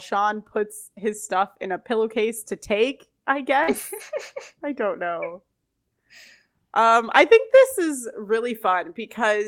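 Right after "pillowcase to take I", at 3.63 s, there's a short concealed packet loss: about 40 ms of the call never reached the decoder in time. The receiver papered over the hole by stretching out the sound just before it, then faded back into the real signal by 3.69 s. You hear a quick smear or wobble rather than a gap.

Overlapping that, from 3.67 to 3.73 s, is a lost packet rebuilt from error correction. About 40 ms was lost here too, and the roughness suggests two packets. Each following packet carried a cheap low-bitrate copy, so the decoder played those instead of going silent. The result is continuous but audibly coarser and noisier for that moment.

The same thing happens again from 7.07 to 7.13 s, just before "I think". Another 40 ms or so, probably two packets, was filled from the redundant copies, and it has the same brief grainy, noisier texture with no actual dropout.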